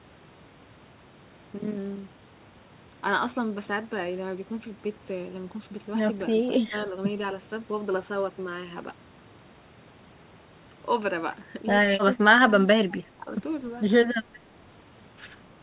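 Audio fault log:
6.61–6.73, 12.15–12.31, 12.5–12.67, 12.89–13.31 and 14.14–14.27 s: speech suppressed in double talk. The voice briefly dips, by roughly 5 to 15 dB. Each dip lasts a fraction of a second. An echo canceller likely turned the talker down while the far side spoke.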